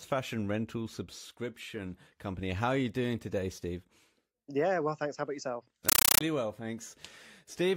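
At 5.89 s, just after "about yourself", a compressed stream is played as audio until 6.21 s. The receiving end treats an undecoded AC-3 bitstream, which fits a 448 kbps Dolby Digital feed, as ordinary samples. Each coded frame comes out as a burst of noise about 9.3 ms long followed by digital silence, repeating 31.25 times a second. The speech is replaced by very loud, chattering static with a rapid, regular stutter.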